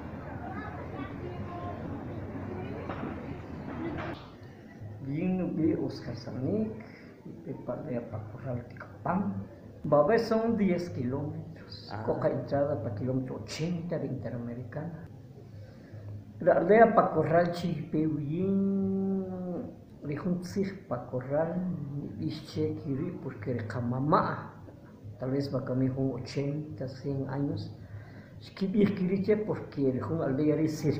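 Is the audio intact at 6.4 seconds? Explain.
Yes, the audio at 6.4 seconds is intact, with no dropout, click, distortion or other fault at that moment.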